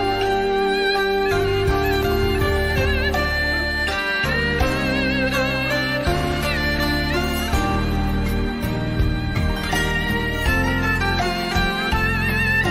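From 1.94 to 2.18 s there is processor overload crackle. The processor repeatedly misses its deadlines for very short buffers, each well under a millisecond. Every missed buffer plays as a brief hole of silence with hard edges, and several of them fall close together. The result is a gritty, tearing burst layered over the sound that stops once the load eases. A single dropout leaves one clean gap, while this is a rapid cluster of tiny ones.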